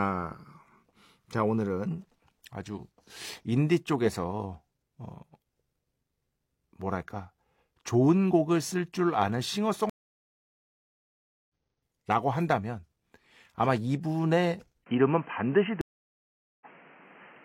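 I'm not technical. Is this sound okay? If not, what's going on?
No. There are two kinds of problem in this speech recording.

The first is a stream reconnect, and it happens twice. From 9.90 to 11.49 s the sound drops out for about 1.6 seconds, and from 15.81 to 16.66 s it drops out for about 0.8 seconds. Each time the connection broke and the player had to rejoin. When the sound returns it has skipped ahead, about a second the first time and a little less the second time, so part of what was said is simply missing.

The second problem begins at 14.84 s and lasts to the end. The speech turns dull and boxy, as if heard through a cheap phone, with nothing above about 3.1 kHz, and a new faint background noise sits underneath. This is likely an input switched to a poorer device, such as a headset taking over from the main microphone. There is only a tiny silence at the change, and the loudness stays the same. 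Unlike the reconnects, nothing is skipped. The speech carries on, but with a poorer tone.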